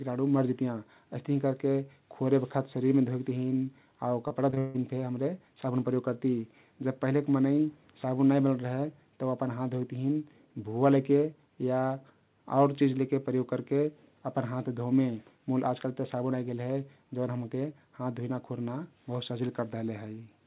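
From 4.28 to 4.76 s, repeated packet loss (robotic sound) breaks up the speech. Four gaps, the longest 159 ms, are each patched by stretching the preceding sound, so nearly half the span turns choppy. Unlike a single dropout, the holes recur in quick succession. Above it all, the call path's G.711 band limit leaves nothing above 4 kHz.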